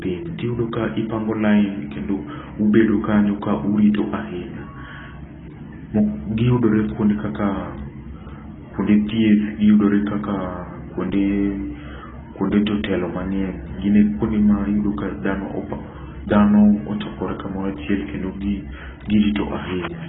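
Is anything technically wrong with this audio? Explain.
Yes. Throughout the speech, nothing is heard above 3.8 kHz, and what remains sounds heavily smeared and warbling. The likely cause is AAC compression at a very low bitrate, around 16 kbps, which starves the 1,024-line frames of bits. A plain low-pass filter would sound dull but clean, without this swirling, fizzy texture.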